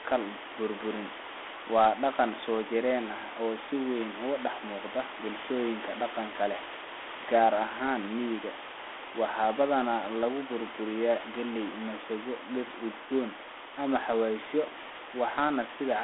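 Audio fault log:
Throughout: Dialogic VOX ADPCM. The speech is confined to a telephone band of 300 Hz to 3.5 kHz, with nothing above 3.8 kHz, which fits 4-bit OKI ADPCM at 32 kbps. Its coarse adaptive step size leaves a plainly audible gritty hiss trailing the speech.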